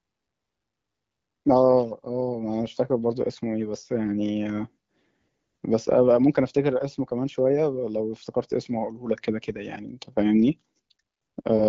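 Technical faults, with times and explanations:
No technical faults heard.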